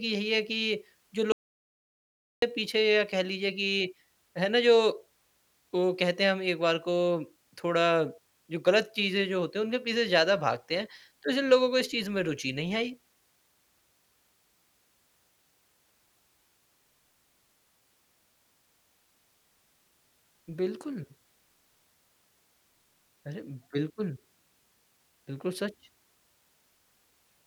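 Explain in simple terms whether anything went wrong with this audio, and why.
At 1.32 seconds the speech cuts off abruptly into total silence, with not even faint background hiss, and returns at 2.42 seconds. This is an audio dropout to silence. The likely cause is that the input signal was briefly lost, so the recorder wrote blank audio, and about 1.1 seconds of speech is gone.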